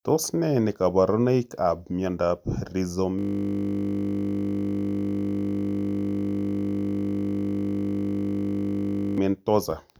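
A system hang loop runs from 3.19 s to 9.18 s. The playback path froze while the hardware kept replaying one 20 ms slice of the ring buffer, nearly 300 times over, so the speech gives way to a steady 50 Hz buzz.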